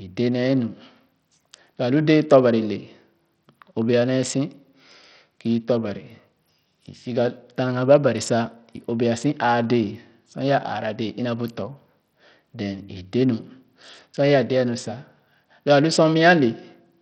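Speech whose treble thins out and flickers throughout, with a gritty, grainy noise and aliasing clinging to the sound. This is heavy Bluetooth SBC compression, likely from a small bit pool, fitting roughly 64 kbps, that starves the upper sub-bands and coarsely quantises the rest.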